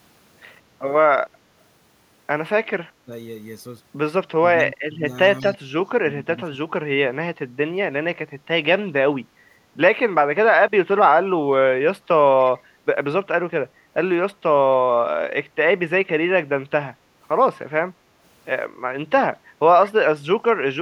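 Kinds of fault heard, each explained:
Speech suppressed in double talk: The speech dips four times, most noticeably around 4.4 to 6.6 s, where it falls by about 15 dB, with lighter dips of about 5 dB later. This is likely an echo canceller ducking both sides while they overlapped.
Echo leak: Three tiny scraps of delayed speech come back, at about 5.4, 12.5 and 19.9 s, each trailing the original by 192 ms and sitting roughly 25 to 30 dB down. That's likely loudspeaker pickup that the far end's canceller didn't fully remove.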